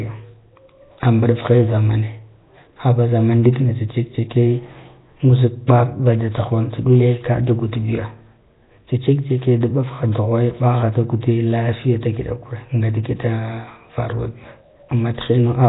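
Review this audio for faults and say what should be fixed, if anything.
Likely Nellymoser compression throughout, at a rate that fits about 16 kbps, starves weak bands of bits, leaving the speech hissy, noise-haloed, smeared underwater and empty above 3.8 kHz. To prevent it, capture and send through a modern wideband codec at a generous bitrate instead of the old Flash microphone path.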